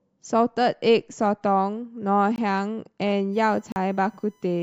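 The playback path failed to deliver samples in time at 2.36 s, leaving a block of digital silence that runs to 2.38 s. For 20 ms the speech drops straight to silence and returns with no fade, and is heard as a brief hole. This points to an output buffer that was not refilled before it was due.

From 3.33 s to the end, current drawn by the USB bus in its 1 ms frames is leaking into the audio through the power or ground, producing USB whine. It is a steady tone of fixed pitch at 1 kHz, strongest at that fundamental, and sits roughly 40 dB below the speech. It is faint but present under the remaining audio.

A second block of digital silence runs from 3.72 to 3.76 s, while the whine is still present. This 40 ms gap is twice as long as the first, so the hard cut to silence and back is heard more as a short hole than as a tick.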